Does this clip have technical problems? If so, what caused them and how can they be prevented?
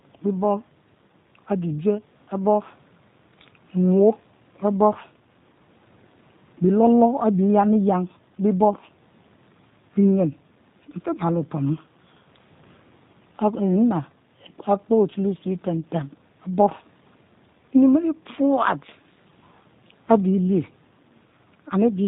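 Yes, the whole clip carries plainly audible G.729 codec damage. The speech is rebuilt from a vocal tract model, a pitch predictor and a few pulses per frame, so it sounds rough and synthetic, with nothing above 4 kHz, which fits an 8 kbit/s G.729A link. To prevent it, use a wideband codec such as Opus or G.722 end to end instead of G.729.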